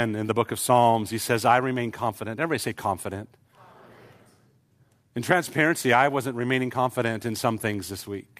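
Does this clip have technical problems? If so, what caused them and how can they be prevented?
No, there are no technical problems in this clip. There is nothing here that needs preventing.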